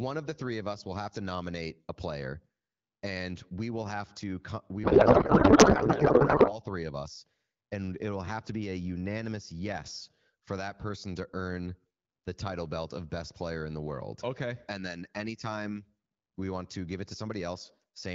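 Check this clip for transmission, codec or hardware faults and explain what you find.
One transmission fault is audible: a codec payload misread from 4.83 to 6.59 s. It begins right after "will have to we" and clears by "three of us and". During that stretch the speech gives way to garbled noise and warble that barely tracks it. Here the decoder is reading the AMR bits with their fields in the wrong places. That fits octet-aligned frames being unpacked as bandwidth-efficient ones. Clean speech returns once both ends agree on the packing. The AMR wideband (HD Voice) coding underneath, at 12.65 kbit/s, leaves only light codec colouring.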